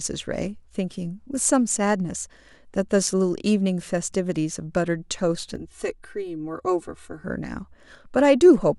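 From 5.56 to 7.24 s, channel delay causes comb filtering: one channel lags by around 3 ms before mono summing, cutting regular notches from about 200 Hz upward and leaving the speech hollow.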